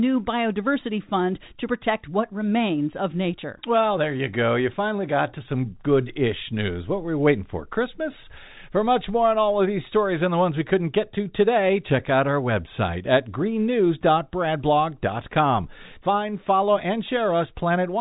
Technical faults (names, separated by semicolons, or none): none